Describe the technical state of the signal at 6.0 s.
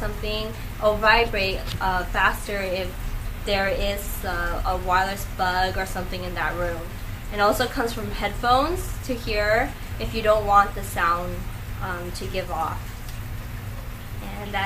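At 6.0 s the signal is intact, with no dropout, clipping, glitch or other fault audible at that point.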